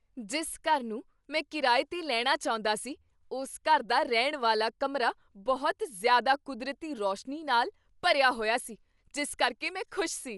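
Dolby Digital compression, likely the cause, runs through the whole speech clip: the sound is dull, with nothing above 11.4 kHz, and plainly audible rough, fluttering noise clings to tones where starved frequency lines are filled with dither, which fits a low bitrate around 64 kbps.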